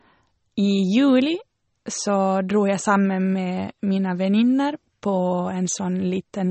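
Throughout the speech, the likely cause is MP3 compression at a bitrate low enough to point to something like 32 kbps. With so few bits, the encoder discards everything above about 8.3 kHz and drops quieter frequency detail that flickers in and out between frames. The result is plainly audible: the speech sounds dull and band-limited, with a watery, swirling texture, metallic chirps on s sounds, and consonant onsets smeared rather than crisp.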